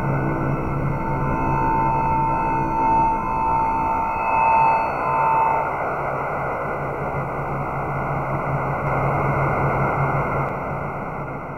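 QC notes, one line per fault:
8.87–10.49 s, doubled audio track: a second, full-band copy of the sound runs roughly 150 ms behind, at about the same level. It carries no decay or room colour and cuts in and out abruptly, likely from an edit holding two out-of-step copies.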